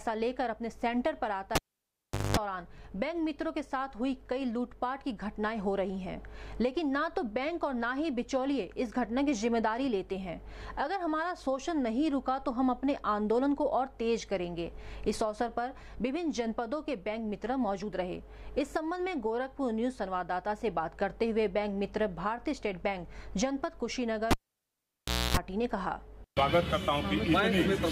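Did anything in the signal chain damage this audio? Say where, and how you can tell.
Yes, in the analogue wiring: cable pulled and plugged in, at 1.55–2.37 s and 24.31–25.37 s. Each gives a pop, silence, then mains buzz from tip contact (50 Hz, then 60 Hz) and a final pop.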